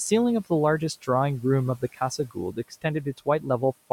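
From 1.79 to 2.0 s, 2.18 to 2.85 s and 3.05 to 3.46 s, you get speech cut by the noise suppressor: it mistakes bits of speech for noise and pulls them down about 10 dB, about 16 dB in the middle stretch, so brief chunks sound swallowed or faint.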